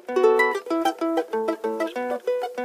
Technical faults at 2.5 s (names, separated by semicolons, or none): audio read two samples at a time (double speed)